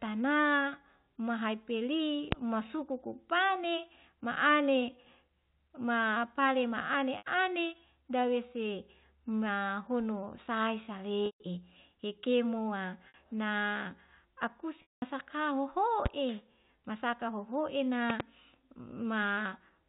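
At 2.32 s a loud pop, likely a voltage glitch such as a switch or static discharge, jumps well above the speech. It shows as a single tall waveform spike and a thin vertical broadband line on a spectrogram. Packet loss with pitch repetition follows at 7.18 s (80 ms), 11.26 s just after "dawese mahono sae" (140 ms), 13.08 s (60 ms) and 14.82 s (200 ms). Each time the last pitch cycle is looped, which gives flat, buzzy harmonic stripes and a repeating waveform that fades to silence in the longer gaps. More pops occur at 16.06 s and as a double pop between 18.10 and 18.22 s.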